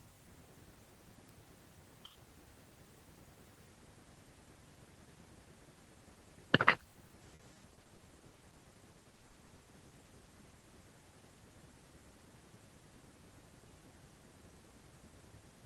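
At 1.29 s there's a bit error spike: a single sample where a flipped bit sent the value jumping by a power of two before it snapped straight back. You hear one sharp, dry tick that has nothing to do with the speech around it. It's broadband because a one-sample jump carries energy right across the spectrum, so it cuts through regardless of what's being said.

From 6.93 s to 10.65 s you get repeated packet loss with that robotic sound. Packets kept going missing or arriving late, a couple dozen holes in all, the longest about 100 ms. Each one got papered over by stretching the last bit of sound, which is how the speech starts to sound choppy and robotic. The patching covers roughly a quarter of that stretch, around 900 ms of filled-in audio, so chunks of speech are just gone. All of this rides on a call-codec path whose top end stops around 12 kHz, which fits Opus at a modest bitrate.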